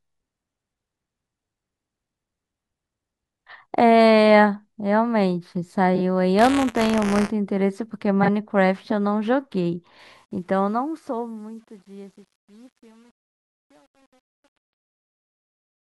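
Speech, with three faults. Two pairs of neighbouring frames, each about 23 ms, were decoded in swapped order, giving brief garbled flutters at 5.95–6.00 s and 8.23–8.29 s. The writing program and the playback hardware slipped against each other in a ring buffer, so a small slice of audio about 20 ms old keeps replacing fresh sound. From 6.39 to 7.31 s this produces a robotic buzz at 172 Hz, which fits a 256-sample buffer. Finally, the fade-out running from about 10 s to 15.9 s was computed at only 9 bits without dither. This truncation distortion on the fade turns the decaying speech gritty, worst from 11.2 s onward.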